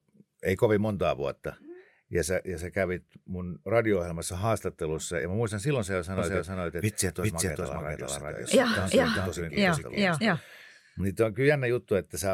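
A speech recording in which, from 6.18 to 10.36 s, right after "muistan silloin sä jo", a second full-band copy of the speech trails the first by roughly 0.4 s at about equal loudness. It begins and ends abruptly, with no reverb or room colour. This doubled audio track likely comes from the signal being captured twice, once through a slower path.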